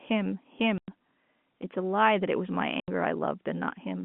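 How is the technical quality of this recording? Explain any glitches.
The speech is interrupted twice by packet loss filled with silence. It comes over a narrowband telephone line that passes little above 3.4 kHz.

At 0.78 s and again at 2.8 s, a run of packets never reached the receiver, and it played silence in their place. The resulting gaps last 100 ms and 80 ms, which fits a loss of 20 ms packets. Each hole begins and ends abruptly, so the speech is chopped off at both edges.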